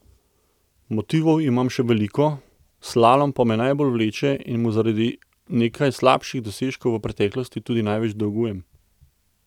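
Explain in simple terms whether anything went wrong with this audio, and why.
Nothing went wrong here: listening all the way through the speech, there's no problem to point to at any moment.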